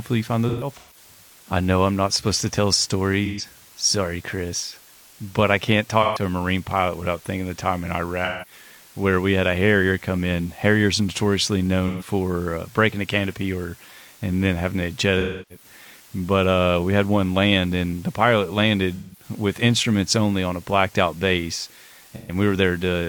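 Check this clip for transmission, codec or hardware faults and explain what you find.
Two faults are present in this speech: a constant dithered quantisation hiss, and eight brief dropouts patched over by the decoder.

Low bit depth with dither runs throughout. The noise floor fits 8-bit quantisation with dither before rounding, turning the error into an even white hiss roughly 25 dB below the speech, without distortion.

AAC frame loss with concealment occurs at 0.49 to 0.96 s, 3.25 to 3.45 s, 6.03 to 6.22 s, 8.24 to 8.52 s, 11.87 to 12.07 s, 15.2 to 15.65 s, 18.95 to 19.23 s and 22.16 to 22.35 s. The decoder rebuilds each missing stretch (128 to 299 ms, the first scattered across about 0.43 s) from the previous spectrum, so each sounds like a smeared, noisy or phasey patch.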